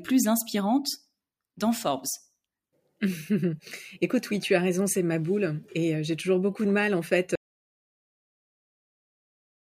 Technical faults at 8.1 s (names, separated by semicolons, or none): audio dropout to silence